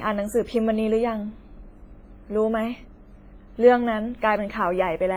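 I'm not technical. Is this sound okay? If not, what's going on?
No. All the way through, the speech has a washy, ringing quality, as if each sound leaves a metallic smear behind it, and a hiss that swells and fades along with the talking instead of staying steady. That pattern is the mark of heavy compression, most likely WMA compression squeezed very hard. Ordinary background hiss would sit at a constant level, even in pauses; here the noise rises and falls with the speech itself.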